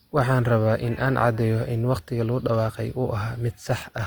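It's a short speech clip with Opus compression damage plainly audible the whole way through. The top end still runs to about 20.2 kHz, so it isn't muffled. The grit is in the texture instead: voiced sounds come out rough and grainy, because high bands starved of bits get padded with folded or noise-like content rather than left empty. That points to the likely cause being Opus's music mode running at a low rate, something around 24 kbps.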